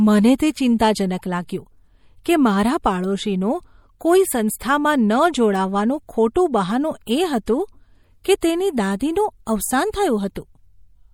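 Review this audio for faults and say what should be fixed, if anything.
Throughout the speech, the sound is watery and swirly, with metallic chirps on s sounds and smeared attacks. This is likely MP3 compression at a low bitrate, around 64 kbps. Starved of bits, the encoder drops weak frequency lines, which flicker between frames. Keep an uncompressed master, or encode at a much higher bitrate.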